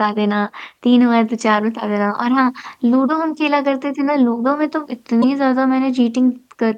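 At 5.21 to 5.24 s the speech jumps ahead and a brief chirp, noise burst or short hole follows, about one 26 ms frame, likely a broken MP3 bit reservoir after frames were cut.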